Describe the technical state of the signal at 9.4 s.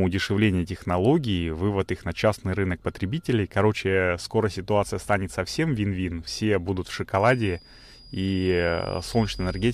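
At 9.4 s a feedback whistle is present. It begins at 7.09 s, just after "все будут в", and runs to the end of the clip at 9.73 s. A thin, steady tone near 4.9 kHz sits behind the speech, roughly 25 dB below it. Its level swells and fades slowly. The likely cause is a loudspeaker-to-microphone loop held right at the edge of feedback. One frequency keeps ringing but never runs away into a howl.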